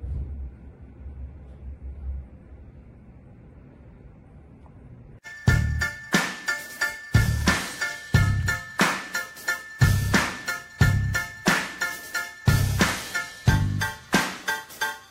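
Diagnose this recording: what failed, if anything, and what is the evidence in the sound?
At the network or storage stage, frames arrived out of order: two adjacent runs of two codec frames, each run 46.4 ms, were swapped and decoded that way. From 8.40 to 8.48 s the sound flutters garbled, losing no time.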